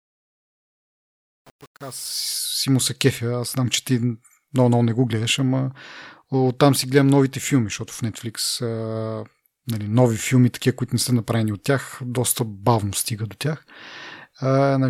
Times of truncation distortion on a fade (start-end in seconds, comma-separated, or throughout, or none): 0.00-2.37